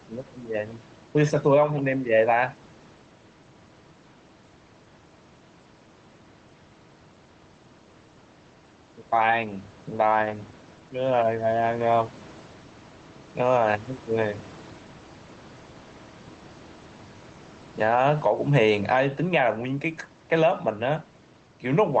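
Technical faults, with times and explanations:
Throughout, gain pumping: the room background sits about 31 dB below the speech, and the gain swings by around 10 dB. Loud and soft passages sit close together, so the sound comes across squashed. The likely cause is microphone gain set far too high, with a fast limiter or compressor pulling the level down on every loud sound and letting it recover in the gaps.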